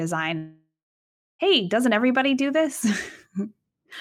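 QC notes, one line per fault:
0.37–1.42 s, long network dropout: the sound breaks off and the receiver carries the last fragment on as a fading buzz for a few tenths of a second, then holds about 0.65 s of silence. Audio resumes at "doesn't everybody do" with roughly 1.02 s of the original missing, so the gap isn't just quiet but lost material. This is likely a run of packets that never arrived, leaving concealment to fill the hole until it gave up.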